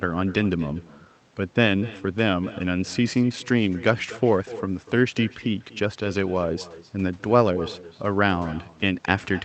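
From start to finish the speech carries an echo with no canceller. Each phrase is followed, about a fifth of a second later, by a faint copy sitting around 18 dB below the original, thinner than the direct sound. That's the far end playing the call through a loudspeaker, its mic picking it back up, and nothing subtracting it before it returns. The whole thing rides over the call codec's usual coding texture, with the top end stopping at around 8 kHz.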